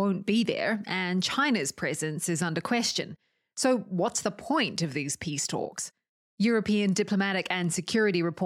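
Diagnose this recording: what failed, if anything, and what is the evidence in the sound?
Nothing failed; no fault is audible anywhere in this recording.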